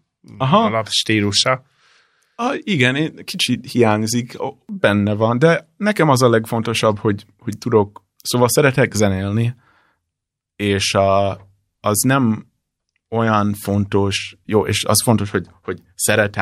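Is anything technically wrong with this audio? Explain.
No, nothing in this speech recording stands out as a technical fault. The audio holds steady across its whole length, with no fault that can be pointed to.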